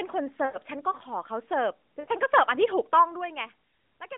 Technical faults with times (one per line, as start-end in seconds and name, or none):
0.46-0.58 lost AMR speech frames
2.00-2.09 lost AMR speech frames